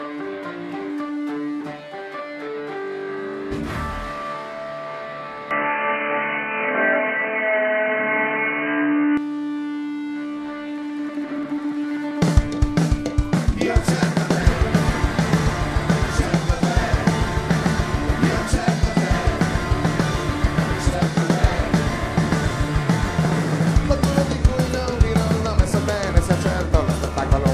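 At 5.51 s the sound abruptly turns dull and boxy, with nothing reaching above 3 kHz, and it stays that way until 9.17 s, when the full bandwidth returns. There is no gap at either transition. The level shifts modestly, by a few decibels, and a faint new background noise appears well below the signal. The likely cause is an input switched to a poorer device, such as a headset in call mode, whose narrow passband, gain and noise floor replace the original microphone's for that stretch.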